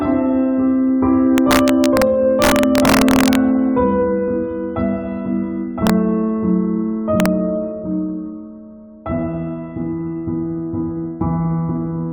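Integer overflow shows up at 1.38 to 2.02 s, 2.42 to 3.35 s, 5.87 to 5.90 s and 7.20 to 7.26 s. Peaks pushed about 0 to 3 dB past full scale wrap to the opposite sign instead of being limited, so you get harsh, violent cracks far nastier than ordinary clipping.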